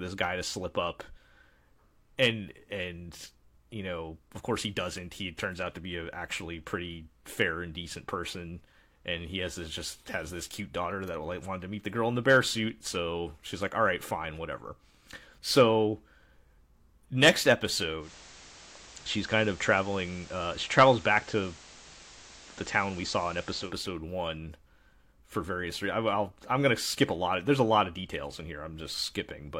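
A speech recording where, at about 17.99 s, the audio drops into digital radio blending to analogue. The receiver lost its digital stream and cross-faded over roughly 133 ms to the station's FM broadcast. You can hear hiss come up, sitting around 20 dB under the speech, and the level shifting by about 1 dB. It blends back to digital at around 23.74 s.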